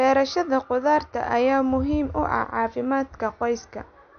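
Throughout, the speech sounds watery and dull, with nothing above about 6.5 kHz, which is likely MP3 compression at a low bitrate, plausibly around 48 kbps.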